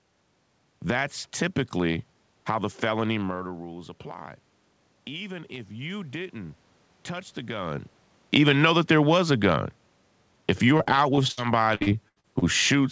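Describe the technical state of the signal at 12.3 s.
At 12.3 s the audio is in a stretch of repeated packet loss (robotic sound), 11.75 to 12.44 s. Five closely spaced gaps, the longest 77 ms, are patched by extending the previous sound. That makes the speech choppy, with pieces missing, unlike a single isolated dropout.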